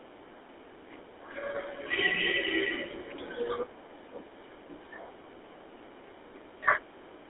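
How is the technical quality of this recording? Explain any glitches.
The quality is poor: the whole recording has passed through a GSM full-rate codec. From start to finish, the speech is squeezed into a band of roughly 300 Hz to 3.6 kHz, consistent with a 13 kbps phone link. The codec rebuilds the voice from a vocal-tract model excited by evenly spaced pulses, keeping only a third of the excitation detail, so the speech sounds clearly buzzy and gravelly as well as thin and muffled.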